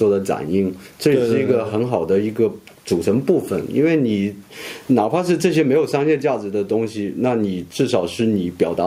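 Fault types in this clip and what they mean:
There are no fault types in this clip, so there are none whose meaning needs explaining.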